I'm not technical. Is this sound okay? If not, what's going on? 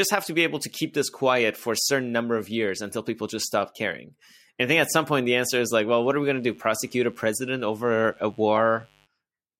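No. From 6.0 to 9.1 s, just after "the answer is like", there's a quiet, raspy mains buzz: electrical interference leaking in from the 50 Hz power supply.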